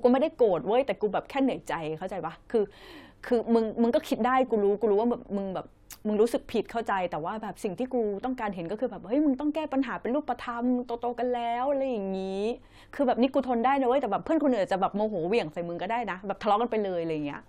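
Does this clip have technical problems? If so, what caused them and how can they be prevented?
No, nothing in this speech recording calls for a fix, so there's no cause to trace and nothing to prevent.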